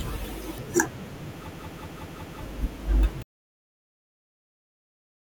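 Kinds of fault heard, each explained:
System hang loop: the playback path froze while the audio hardware kept replaying the same ring buffer, so one short slice of the speech repeats exactly. From 1.49 s to 2.42 s a segment of about 186 ms cycles five times at 5.38 Hz, producing a rapid machine-gun stutter rather than a steady buzz. That period fits an 8192-sample buffer. When playback resumes, roughly a second of the original speech is missing.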